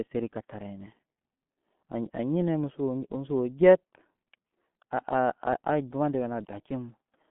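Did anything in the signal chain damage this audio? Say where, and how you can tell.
Yes. G.723.1 codec damage runs through the whole clip, at the codec stage. Nothing reaches above 3.8 kHz, the band sits near 150 Hz to 3.4 kHz, and the heavy muffled, hoarse quality with smeared consonants points to a coarse, slowly updated voice model around 6 kbit/s.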